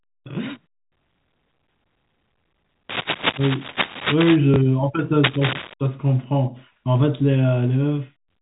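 From 2.89 to 4.36 s, and again from 5.23 to 5.74 s, dense, irregular scratching and rustling sits over the speech at roughly the same loudness as the voice. This is cable scratch noise, likely from a worn cable or connector whose contact resistance fluctuated as it moved.

Between these, at 4.54 to 4.56 s, packet loss with the last packet repeated fills a single lost 20 ms packet with a replay of the previous one. The moment comes through as a small blip within the band-limited G.711 telephone sound.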